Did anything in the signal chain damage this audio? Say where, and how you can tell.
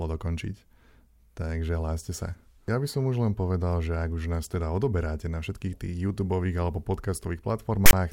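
Yes, and it happened at the storage stage. Right near the end, from 7.86 to 7.93 s, the speech gives way to a short, hard-edged burst of rasp that's lopsided, pushed off to one side of zero, and then drops into dead silence. That's file tags played as audio: a block of text metadata got read as samples, so the character bytes become a harsh offset buzz and the zero padding after them plays back as nothing.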